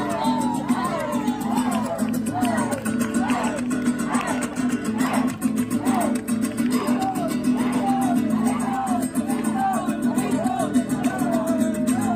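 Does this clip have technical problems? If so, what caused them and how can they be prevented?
No, nothing stood out as a technical problem on listening, so there is nothing here that needs preventing.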